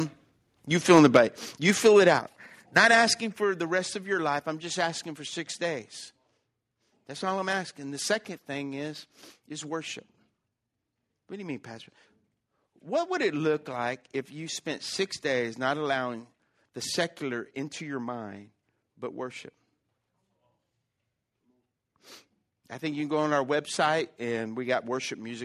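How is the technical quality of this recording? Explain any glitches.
The recording has two connected problems near the start: a burst of distortion, then three abrupt drops in level.

From 0.95 to 1.17 s there is microphone overload. The peaks push about 6 dB past what the converter can represent, so their tops are sliced flat. Only a small fraction of samples is affected. Still, the loudest syllables take on a harsh, crackly edge. The likely cause is a microphone input set too high for the speaker.

Right after that, the microphone volume is stepped down three times. The first drop is at 1.17 s, just as the distortion ends. The others follow at 2.19 s and 3.21 s. They take away about 5 dB, 5 dB and 4 dB. Each is a single sudden step, not a fade. Speech and background fall together. This is likely automatic gain control in the call software reacting to the overload.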